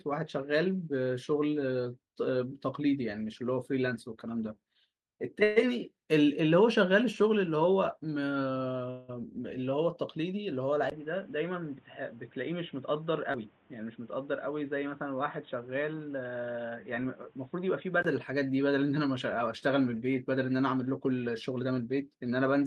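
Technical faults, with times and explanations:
5.43 to 5.58 s and 8.90 to 9.10 s, call audio freeze: the speech stalls for about 0.15 s and then 0.2 s, filled with a fading continuation of the last sound before picking up where it left off, nothing lost. The likely cause is packets delayed until the jitter buffer ran dry. On a spectrogram the preceding harmonics smear into a decaying band.
10.90 to 18.05 s, input switched to a poorer device: after a 20 ms silence the speech turns dull and boxy, about 5 dB quieter, with nothing above 3.8 kHz and a new noise floor roughly 30 dB down, likely from a change to another microphone or a headset call profile. The spectrogram shows a hard ceiling at 3.8 kHz, and the waveform a brief flat gap at the switch.
13.33 to 13.36 s, skip ahead: playback jumps forward, dropping around 70 ms of speech and joining the two sides with only a tiny 11 ms bridge. 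The waveform shows an abrupt splice, and spectrogram formant tracks break and resume at a different point.
15.05 to 15.83 s and 21.49 to 22.03 s, jitter buffer speed-up: the speech runs 7% and then 10% fast at unchanged pitch, sounding hurried, as the receiver trims roughly 70 ms in short pitch-period pieces each time to shrink excess delay. Harmonic spacing stays put on a spectrogram while syllables compress in time.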